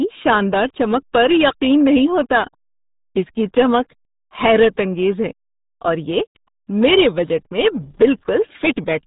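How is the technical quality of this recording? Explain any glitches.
The technical quality is poor: the speech runs through a heavy low-bitrate speech codec for its whole length, and two short stretches are hard-clipped.

RealAudio 14.4 codec, throughout: the audio was squeezed through the old RealAudio 1 dial-up codec, and the heavy damage suggests a rate of about 8 kbit/s. The codec models the speech coarsely and discards everything above 3.8 kHz, so the voice sounds muffled and gargly.

Hard clipping, 0.27 to 0.34 s and 7.68 to 8.05 s: in these stretches the peaks exceeded the stage's limit by about 3 dB and about 5 dB respectively, and were sliced flat. The flat tops add high harmonics, heard as crackle on the peaks, briefly early on and for longer near the end.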